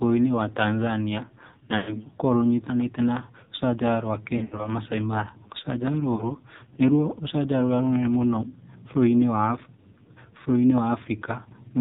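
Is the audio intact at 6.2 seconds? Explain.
No. Around 6.2 s, the link lost AMR speech frames. The span from 6.16 to 6.34 s points to about 40 ms of missing data, roughly two 20 ms frames. The decoder filled the gap by repeating its last good pitch and vocal tract settings at falling gain, so the sound smears and fades before recovering, somewhat rough, on "nĩ ruo rũcanjara rũrĩa".

The whole clip, this moment included, also passes through the AMR narrowband mobile codec at 5.9 kbps, with heavy damage. Nothing above 4 kHz survives, and a pulse-driven vocal tract model rebuilds the speech, which sounds muffled, buzzy and synthetic.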